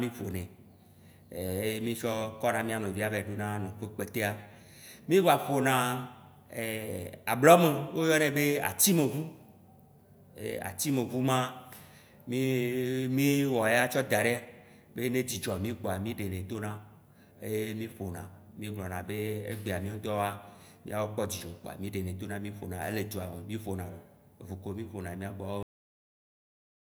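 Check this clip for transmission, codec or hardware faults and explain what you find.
One fault is present: a cut-off end at 25.63 s. The final buffers of the recording were never written out, so the signal path simply stops delivering samples partway through a sound. The speech is severed mid-utterance at 25.63 s and falls straight to digital silence, with no natural decay or trailing room tone, and that dead silence holds for about 1.3 seconds until the clip finishes.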